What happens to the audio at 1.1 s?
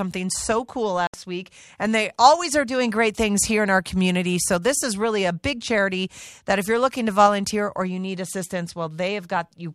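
A digital broadcast dropout: the receiver stopped getting usable frames and muted from 1.07 to 1.14 s, a gap that fits roughly two lost frames. The speech fades out within about 3 ms into a short silent hole, then resumes mid-flow, with that stretch missing.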